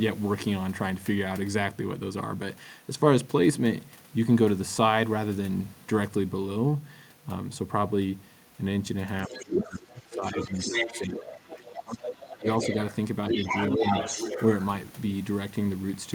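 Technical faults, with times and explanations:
9.26–12.95 s and 13.33–14.44 s: other side's voice leaking through. A second voice sits under the speech in both spans, only a little below it, roughly 5 dB down. The far end was likely being played over the talker's loudspeaker and picked up again by the microphone, with the echo canceller leaving a large residual. Because the leaked voice is nearly as loud as the talker's, it competes directly rather than sitting in the background.
9.28–12.05 s, 12.36–12.46 s and 13.77–13.84 s: speech suppressed in double talk. The talker's level dips while the leaked voice is present. In the first span the drops add up to about two seconds and reach around 20 dB at their deepest. The two later events are brief, about 15 dB and about 5 dB. With both sides active at once, the echo canceller likely could not tell its own talker from the loudspeaker return and turned the whole signal down.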